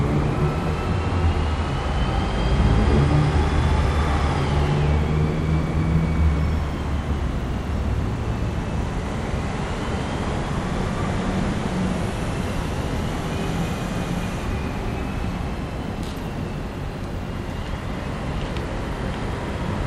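A recording of sounds, with no technical fault audible at any point. Nothing in it points to a problem in how it was captured, processed or played back.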